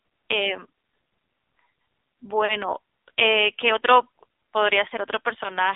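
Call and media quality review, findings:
Buzzy, synthetic, thin voice for the whole clip; nothing above 3.7 kHz, little below 250 Hz. AMR narrowband mobile codec (AMR-NB): heavy vocal-tract-model coding, 20 ms frames. Damage fits a low mode around 6.7 kbps.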